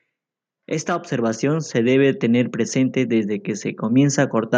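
A speech clip where automatic gain rising kicks in from 0.85 s to 4.53 s: the gain control decides the input's too quiet and slowly pushes it up by about 12 dB, so the voice and the background noise swell together over those few seconds.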